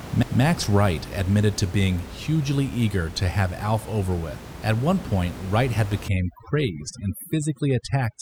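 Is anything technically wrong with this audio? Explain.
Yes. Overdone noise removal affects the clip from 6.08 s to the end at 8.22 s. A noise reducer set far too hard pulls individual frequency bands down whenever they sit near its noise estimate. That strips out the room noise, which earlier sits about 14 dB under the speech, and takes the quieter parts of the speech with it. The background drops and breaks up into twinkling specks.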